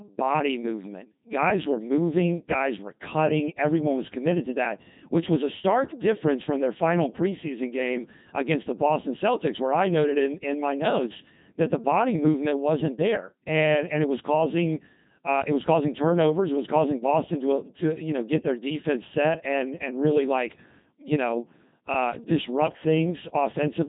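Speech runs through a Codec 2 vocoder for the whole clip. The voice sounds robotic and buzzy, and the damage is heavy. Nothing is left above 3.8 kHz. The decoder never receives the waveform. It rebuilds the voice from sine waves, guided only by pitch, voicing, energy and a rough spectral envelope. The thin, synthetic quality fits a low rate around 2.4 kbit/s.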